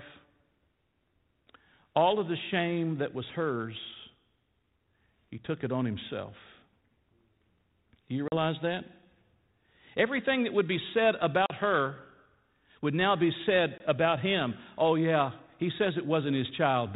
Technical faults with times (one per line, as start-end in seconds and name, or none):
8.28-8.37 packet loss on an ADPCM call
11.46-11.51 packet loss on an ADPCM call
13.78-13.81 packet loss on an ADPCM call